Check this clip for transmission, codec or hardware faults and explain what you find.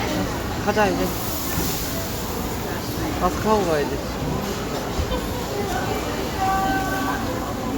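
The signal stays intact throughout, with nothing audible that points to a technical defect anywhere in the recording.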